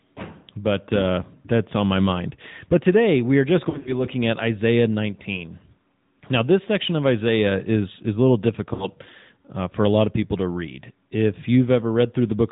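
Throughout the clip the AMR narrowband mobile codec is plainly audible. The speech has the buzzy, synthetic edge of a vocal-tract model rebuilt from sparse pulses, consistent with a mid-rate mode near 10.2 kbps. On a spectrogram everything stops at a hard ceiling at 4 kHz, with nothing above it, and the harmonics below look smeared and grainy rather than cleanly striated.

From 3.70 to 4.01 s, just after "today we are just", there are lost AMR speech frames. About 100 ms of audio goes missing, scattered across roughly 160 ms, with the longest gap lasting 40 ms, which fits around five dropped 20 ms frames. In place of each missing frame the decoder repeats the last pitch and spectral shape at falling gain, so the sound warbles and dips in and out. On the waveform this shows as short sags in the envelope. On the spectrogram, smeared, repeated harmonic patches alternate with briefly thinned sections.

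From 8.74 to 8.94 s, between "is is a little" and "uh for a lot", about 60 ms is lost again, which points to roughly three frames. It gives a brief wobble and a dip in level, and the speech comes back rough for a moment. On the spectrogram it appears as a short stretch of frozen, fading harmonics.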